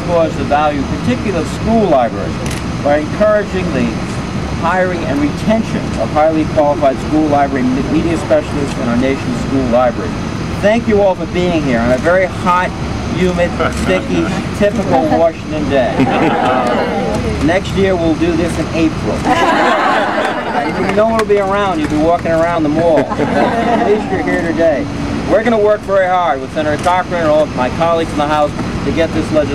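The audio has damaged data in a compressed stream at three points: 7.55, 11.15 and 22.55 s. Each is a brief chirp or blip, under 20 ms. Corrupted bytes there make the decoder misread its frames. It loses sync and must find the next valid frame.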